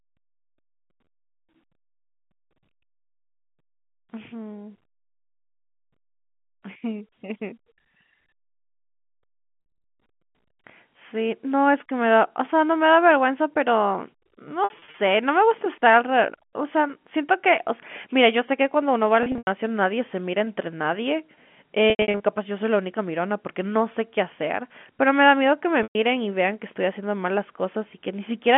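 Packet loss with pitch repetition occurs at 9.6, 14.64, 19.23, 21.9 and 25.83 s. Gaps of 60 to 120 ms at most are each bridged by repeating the last pitch period, so the sound briefly holds on a buzzy tone within the G.711 telephone band.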